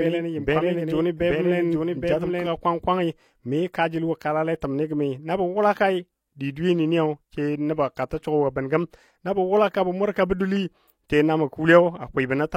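From the start until 2.46 s there is a doubled audio track: a full-band copy of the speech trails about 0.7 s behind, roughly 5 dB quieter and dry, likely from a slower second capture path. A spectrogram shows each pattern repeated and shifted right, ending abruptly at 2.46 s.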